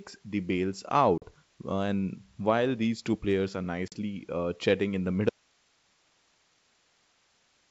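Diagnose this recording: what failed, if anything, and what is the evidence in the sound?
Hard-edged silent holes of 40 ms at 1.18 s after "the bails" and 3.88 s after "these two players are": network packet loss on an ADPCM call desynchronising the decoder's predictor.

From 5.30 s, after "uh chatting in the", the sound cuts abruptly to hiss about 40 dB down until the end: likely an audio dropout to a faint residue, with the downstream path still live.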